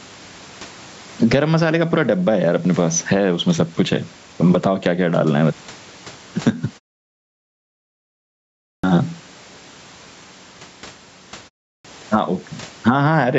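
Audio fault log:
Throughout, gain pumping: the level swings by roughly 15 dB, so loud and soft passages sit unnaturally close together and the whole clip sounds squashed. The likely cause is input gain set far too high for the microphone, with a fast limiter or compressor clamping down on every loud sound and then releasing.
8.70 s and 11.72 s, clipped start after a pause: speech resumes abruptly out of silence with its onset missing, about 135 ms lost at 8.70 s after a pause of about 2.0 s, and about 125 ms lost at 11.72 s after a pause of 0.31 s. The output device drops into an idle state during silence and needs a moment to wake and lock again, so the first sounds after each pause are swallowed before playback catches up.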